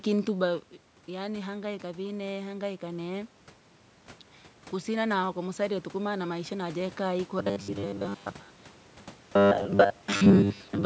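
From 7.39 s to 10.85 s the voice becomes a rigid, metallic buzz pinned at 100 Hz, only loosely following the speech. This robotic sound from repeated short buffers is likely caused by a 10 ms chunk being replayed while most of the real audio is skipped.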